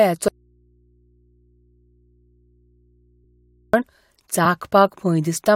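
From 0.28 to 3.74 s an audio dropout to a faint residue cuts the speech abruptly, leaving mains hum about 40 dB down, likely from a live but disconnected input, not a fade. At 4.45 s one compressed frame is skipped, about 20 ms jumped, so the speech jumps ahead.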